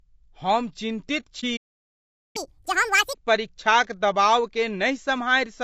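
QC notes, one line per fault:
Throughout: low-delay AAC compression. The codec's short frames resolve harmonics poorly at what sounds like about 32 kbps, so speech is plainly rough and grainy, with a synthetic top.
1.40–1.44 s: AAC frame loss with muting. About 30 ms of coded audio never arrived and was zeroed, leaving a brief dip that fades out and back in.
1.56–2.36 s: playback stall. The player likely ran out of data, so output goes silent for about 0.78 s in mid-flow before the speech resumes.
2.36–3.14 s: catch-up at higher speed. The player resamples its backlog at 2x to recover lost time, raising speed and pitch by about ten semitones before returning to normal.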